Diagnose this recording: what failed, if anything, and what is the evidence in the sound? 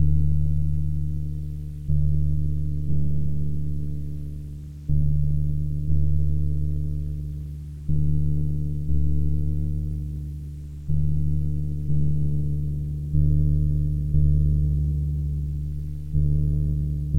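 Grainy distortion runs through the whole clip, riding on the sound and rising and falling with it, with the error sitting roughly 45 dB below the signal. The likely cause is low bit depth without dither at a sample-format conversion, where the audio was truncated to about 9 bits. Because the error tracks the waveform instead of forming a steady hiss, it is not dithered requantisation or background noise, and it lacks the swirly, band-limited character of codec artefacts.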